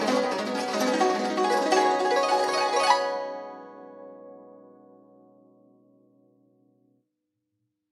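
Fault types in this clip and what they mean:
No technical faults detected.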